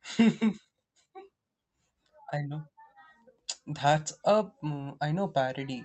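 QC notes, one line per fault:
Throughout: clock drift between sender and receiver. The sender's clock runs roughly 3% slow against the receiver's, so the jitter buffer keeps draining and the receiver must pad the stream. The result is a pace about 3% slow, carried through the 8 kHz Opus call band.
0.20 to 5.72 s: repeated timing corrections. To cover the slow sender, the receiver repeatedly duplicates short pieces of audio, all stretching in the same direction at uneven spacing. Playback runs at 97% speed, adding around a fifth of a second overall.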